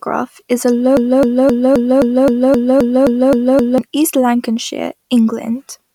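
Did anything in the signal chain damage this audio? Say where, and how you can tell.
Yes. The player or stream buffer likely stalled and kept re-issuing the last fragment it held, producing a broken-record loop from 0.97 s to 3.78 s. The same 0.26 s slice of speech repeats exactly, back to back, 11 times, a mechanical stutter with identical timing and timbre on every pass. Because the stage kept replaying stale data instead of fresh samples, the speech that belonged in those 2.8 seconds is gone.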